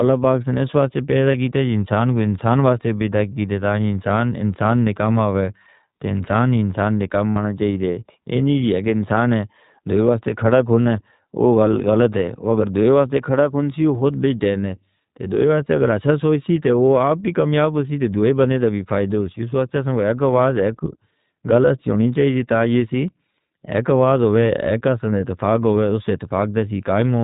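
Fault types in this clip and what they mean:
iLBC codec, throughout: the speech passes through a narrowband VoIP coder that handles each short frame on its own, so nothing above 4 kHz survives and the voice has a thin, plainly audible roughness with a slightly synthetic edge. The frame-by-frame coding and grain fit iLBC's 20 ms mode at 15.2 kbps. Sibilants and breath lose their top end, and the whole clip sounds like an old phone line.
Lost iLBC frames, at 1.32, 7.31 to 7.38, 10.83 to 10.88 and 20.84: packets went missing and the decoder filled each hole by repeating the last pitch cycle mixed with noise, so each gap sounds like a brief held, buzzy vowel. The longest is about 60 ms, between "انسان انسان نے کام" and "چاہیے دے اینی جی". Others fall after "سے اس واسطے پیدا" and after "کو ایک آواز ایک". The voice recovers almost at once after each gap.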